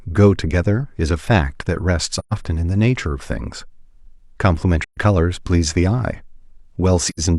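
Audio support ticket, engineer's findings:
Soft-edged dropouts in the speech at 2.19–2.33 s, 4.84–4.97 s and 7.09–7.20 s: AAC frame loss with muting. Decoder zeroing lost frames, overlap windows fading out and back in. First two gaps about 128 ms, fits three frames; last one patchier, longest silence roughly 100 ms.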